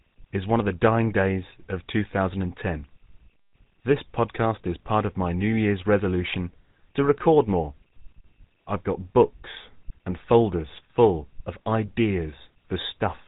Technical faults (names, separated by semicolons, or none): GSM full-rate codec